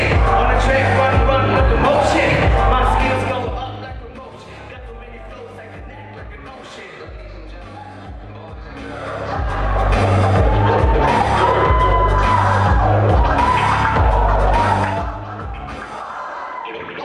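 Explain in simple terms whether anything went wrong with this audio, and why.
The volume was changed in coarse jumps, about ten per second, instead of gliding smoothly. That is zipper noise: each jump leaves a tiny click, so you hear a ticking or zipping sound from 2.99 to 4.10 s, 8.53 to 9.98 s and 14.76 to 15.19 s.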